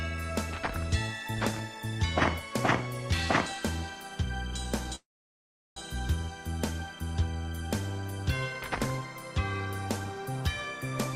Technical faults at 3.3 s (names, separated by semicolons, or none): none